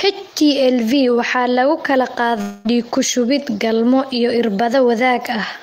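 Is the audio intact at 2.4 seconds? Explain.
No. From 2.41 to 2.67 s there is a long network dropout, most likely caused by a stretch of packets that never arrived. About 240 ms of the speech is missing. The receiver covered roughly 230 ms of the gap by extending the last sound into a fading, buzzy hiss, so no true silence is heard. On a spectrogram the harmonics smear into flat, decaying horizontal bands. The waveform tapers smoothly, then the speech resumes abruptly with the lost portion gone.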